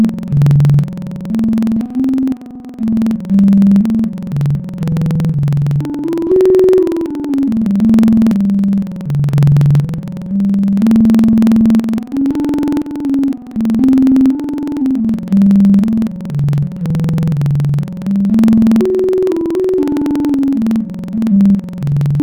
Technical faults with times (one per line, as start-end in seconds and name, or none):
0.00-22.23 interleaved audio read as planar